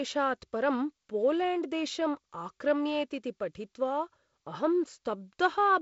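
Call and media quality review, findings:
No faults found in the speech. The G.722 wideband telephone coding path can be heard as nothing above 7.7 kHz, with a light hiss and slightly noisier low band that fit its 48 kbit/s mode.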